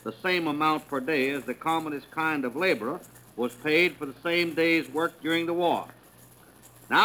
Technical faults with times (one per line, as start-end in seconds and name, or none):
0.00-7.04 sample clock jitter